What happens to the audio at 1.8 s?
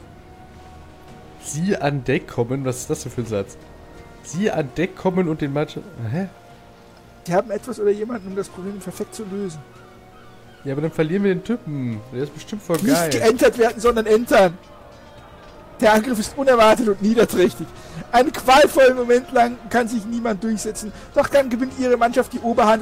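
Nothing goes wrong at 1.8 s; the audio runs on intact through that moment.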